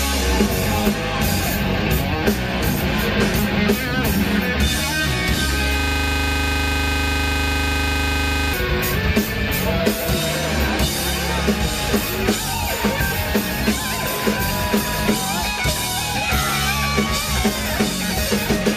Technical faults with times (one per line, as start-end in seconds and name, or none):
5.80-8.53 system hang loop